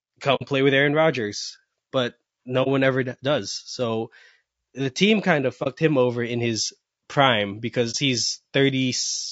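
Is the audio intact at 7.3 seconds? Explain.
No, not really. At 7.3 seconds the speech carries the same low-delay AAC compression damage heard across the whole clip, and it's plainly audible. The voice sounds rough and grainy, with a noisy fill between the harmonics and a top end that feels thinned or a bit synthetic. That's likely AAC-ELD at a low rate, around what you'd expect near 32 kbps: at that bitrate the encoder runs short of bits for its roughly 500 frequency lines per low-delay frame, so it smears things.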